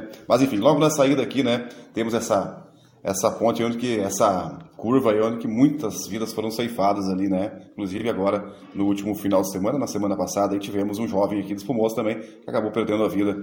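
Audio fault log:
7.97–8.03 s, frames out of order: two neighbouring single frames, each about 23.2 ms, were decoded in swapped order, so this brief stretch plays with its halves exchanged. It sounds like a garbled flutter, and no time is lost.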